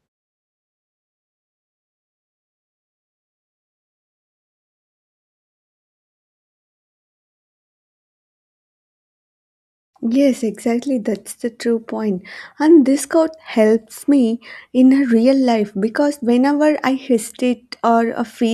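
Nothing's wrong with this bit of speech, and there's nothing here to flag.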